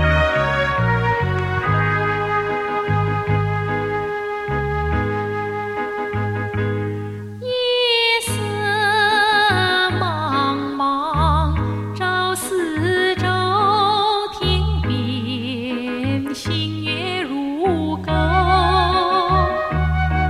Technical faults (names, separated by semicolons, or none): none